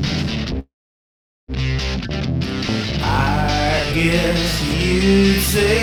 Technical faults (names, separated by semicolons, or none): call audio freeze